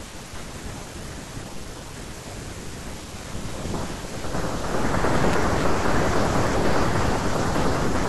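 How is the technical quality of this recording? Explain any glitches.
One glitch stands out in this speech recording. At 5.33 s there is a repeated buffer. A piece of sound about 5 ms long plays twice more when fresh audio arrives late. The hard joins make a brief click or buzz. Nothing appears to be lost.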